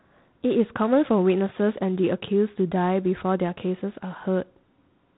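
Throughout the speech, G.726 ADPCM coding spends too few bits on each sample's prediction error, and the harsh, rasping hiss riding on the level points to its 24 kbit/s mode. The band stops at 3.9 kHz, leaving the sound thin and telephone-like.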